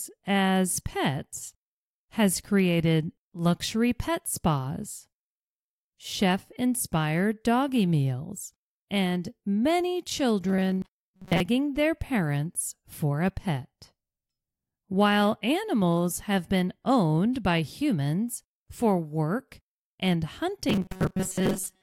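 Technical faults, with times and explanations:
10.49–11.40 s and 20.69–21.83 s (to the end): robotic sound from repeated short buffers. In both stretches the speech collapses into a rigid, metallic buzz pitched at 188 Hz that only loosely tracks the speech. A 188 Hz buzz corresponds to a loop of about 5.3 ms. The likely cause is audio arriving too slowly, so the playback fills most of the gap by replaying that last short block while the real audio is dropped, which imposes the fixed pitch.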